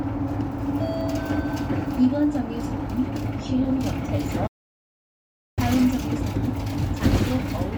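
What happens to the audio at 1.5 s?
Nothing goes wrong at 1.5 s: the sound carries on intact through that moment, with no dropout, click or other fault.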